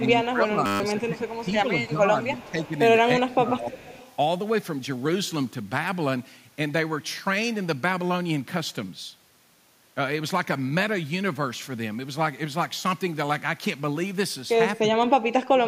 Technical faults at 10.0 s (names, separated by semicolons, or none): none